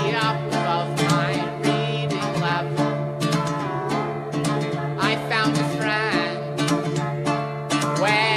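Nothing goes wrong anywhere in this bit of music; there's simply nothing to flag.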